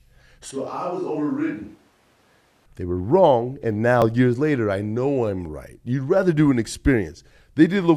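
From 0.51 to 2.66 s, the speech sounds like a switch to a distant microphone. The change in is sudden, and so is the change back. The voice turns roomy and hollow, with less low end. It drops by about 5 dB. Room noise rises to around 35 dB below the speech. The likely cause is that the close microphone's signal failed or was dropped. That would leave only a microphone further away, such as a camera's, picking up the talker.

From 4.02 to 4.04 s there is an overlap between stream segments. The timing fits segments of 6 seconds each. Two adjacent segments claimed the same stretch of time. The player trimmed that stretch, even though the sound in it was never actually duplicated. So about 20 ms of audio is missing, and the waveform jumps across the gap. It comes through as a tiny skip in the speech.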